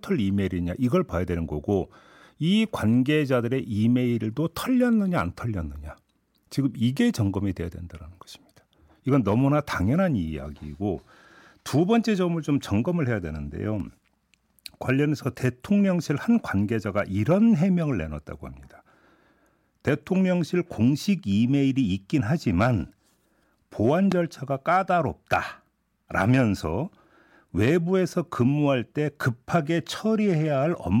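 At 24.12 to 24.14 s a single loud pop lands on the speech, peaking roughly 15 dB above it. A voltage spike, likely from a plug, switch or static, was added to the signal. Unlike a dropout, the speech carries on underneath.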